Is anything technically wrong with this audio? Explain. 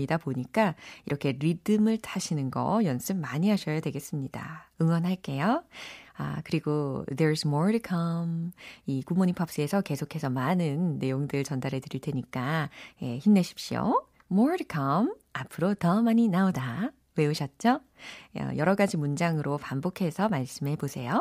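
Yes. The speech has three isolated clicks from dropped samples: at 1.10 s, at 10.25 s between "come 이 굿모닝 팝스에서" and "많은 내용들 전달해 드릴", and at 13.72 s between "전달해 드릴 테니까 예" and "more to". Each is a single sharp tick. The likely cause is a fraction of a millisecond of samples vanishing, so the waveform jumps straight to a later value. Unlike a dropout, no sound goes missing and there is no audible gap, only the click.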